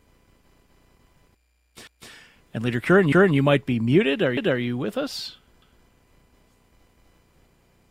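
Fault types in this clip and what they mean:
Overlapping chunks: a 250 ms stretch plays twice at each join, a regular stutter, because each one-second chunk starts before the last one ended.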